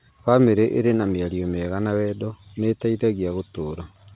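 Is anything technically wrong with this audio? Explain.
No, this is speech carried over ordinary G.711 telephone coding, with the band stopping at 4 kHz as that format requires, which fits mu-law coding at an 8 kHz sample rate, and nothing in it departs from what that channel normally delivers.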